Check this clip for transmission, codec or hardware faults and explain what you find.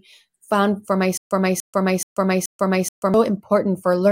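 One fault is present: a stutter with silent gaps from 1.17 to 3.14 s. A 291 ms speech fragment repeats four times, each followed by 137 ms of digital silence, at a steady 428 ms period. The stream likely stalled and replayed its last buffer at each retry, so the audio due in that span is lost.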